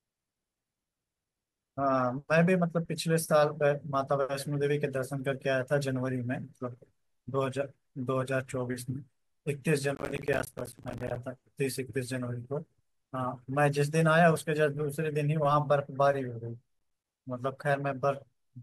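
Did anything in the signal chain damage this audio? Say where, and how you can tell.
Yes. At the driver and buffer stage, the processor repeatedly missed its deadlines, leaving hard-edged gaps of silence about 10 ms each. The result is processor overload crackle, a gritty tearing across the speech from 9.95 to 11.16 s and again briefly from 16.79 to 17.04 s.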